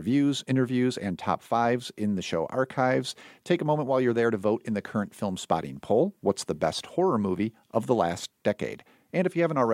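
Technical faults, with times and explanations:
No technical fault can be heard anywhere in the speech signal.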